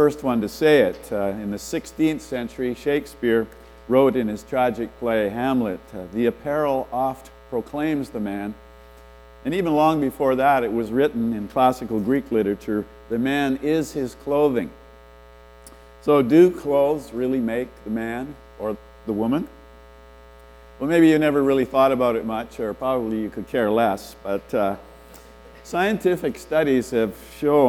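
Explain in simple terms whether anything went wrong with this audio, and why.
Nothing went wrong with this audio. There is no glitch, dropout or other technical problem anywhere in it.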